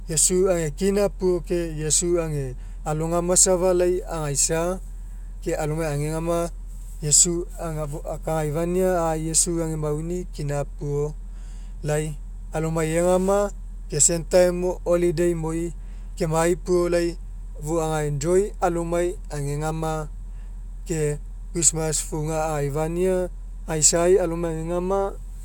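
Nothing in this speech recording jumps out as a technical problem; it just runs along without any glitches worth pointing to.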